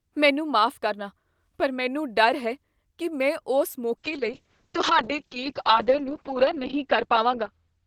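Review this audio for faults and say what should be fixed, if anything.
From 3.98 s to the end at 7.86 s there is a call bitrate drop. The bandwidth estimate fell and the encoder coded far more coarsely, so the speech turns rough and muffled as the audio band narrows from 20 kHz to 6 kHz. This fits a fall from about 48 to 6 kbps, held at its lowest for 2.56 s. To prevent it, set a minimum bitrate floor and smooth the congestion controller's bandwidth estimate so a short dip cannot push Opus into mediumband coding.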